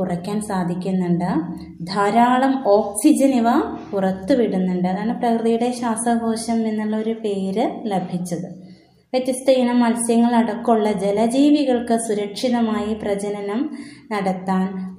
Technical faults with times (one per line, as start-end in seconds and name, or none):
none